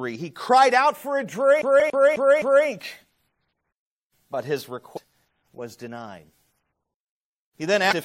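Right after "cried out for a", from 1.62 to 2.68 s, the CD is stuck on one turn: a scratch keeps knocking the laser back a track, so a 0.26 s slice of speech plays five times over, each pass cut by a brief mute at the jump. It sounds like a fast, even stutter. On a waveform it shows as identical blocks repeating at a steady 258 ms spacing, with a thin gap or sharp edge at every seam.

Inside that loop, at 1.80 s, comes the first burst of damaged data in a compressed stream, followed by two more at 4.96 to 4.98 s, between "but his" and "was denied", and at 7.91 to 7.93 s. At each one the decoder hits corrupted bytes, loses frame sync and hunts for the next header, producing a short chirp or blip. A spectrogram shows each as a narrow vertical smear of unrelated energy across the band, roughly 20 ms wide, breaking the normal speech harmonics.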